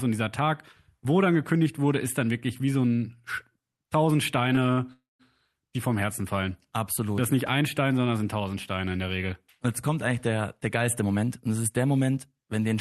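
A packet arriving late in this speech recording emptied the jitter buffer at 4.73 s, so the receiver held the last sound for 39 ms until the packet turned up, giving a short stall: a stretched sound with a slight buzz or dip that ends at 4.80 s, with nothing lost. A call audio freeze follows from 4.93 to 5.22 s, likely caused by packets held up in transit draining the buffer again. The final sound trails off as a fading buzz or hiss into about 190 ms of silence, inserting roughly 265 ms of gap before the speech resumes where it stopped. At 7.47 s, chunks out of order put a single 5.8 ms chunk after the one meant to follow it, so the sequence is briefly scrambled and three hard joins produce a quick jumble. From 10.70 to 12.33 s, a jitter buffer speed-up shows the receiver draining surplus buffered audio by repeatedly cutting out tiny pitch-period slices, around 150 ms in total. The speech runs at 110% of its pace with unchanged pitch and sounds hurried. 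All of this passes through an Opus call path at 40 kbps, whose 12 kHz bandwidth leaves nothing audible above that frequency.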